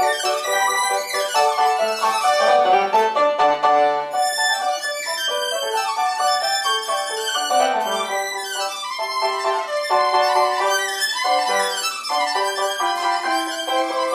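From start to finish the audio is read two samples at a time, double speed: pairs are treated as one frame, so everything runs twice as fast and a full octave higher.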